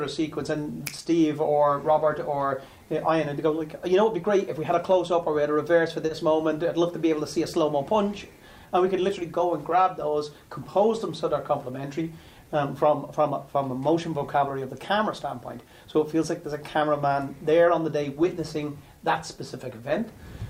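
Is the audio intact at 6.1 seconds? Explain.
No. A short stall from a late packet runs from 6.06 to 6.11 s: the jitter buffer emptied, so the last sound was held about 30 ms longer, with nothing lost. On a spectrogram it appears as a smeared, flat band; the waveform shows a brief repeated stretch with a slight dip.

Underneath is clock drift between sender and receiver. The sender runs about 3 percent slow, so the buffer keeps draining, which is why that stall could occur. This shows as no distinct mark at this instant.

Repeated timing corrections run from 0.20 to 20.44 s. Small pieces are repeated to keep pace, slowing the sound to 98 percent and adding about half a second overall. They are heard, if at all, as faint hiccups and appear as tiny duplicated waveform segments.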